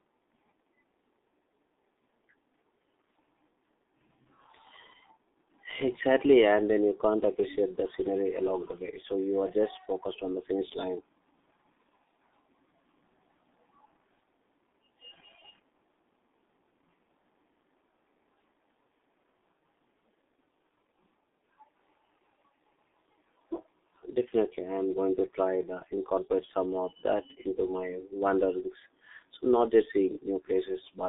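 From start to end, the speech carries G.723.1 codec damage, and heavily. Each 30 ms frame is squeezed into a crude vocal model that updates slowly, which fits a rate of about 6.3 kbit/s, so voices come out muffled and hoarse and consonants smear together. The band runs from roughly 250 Hz to 3.7 kHz. On a spectrogram, energy stops flat at 3.8 kHz, with a thin, blurred low end and smudged, frame-stepped harmonics.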